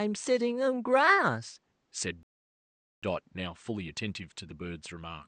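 At 2.23 s the speech cuts to silence until 3.03 s, a rebuffering stall: the player exhausted its downloaded audio and waited for more to arrive. Playback then resumes exactly where it halted, so nothing is lost, but about 0.79 s of dead air is inserted.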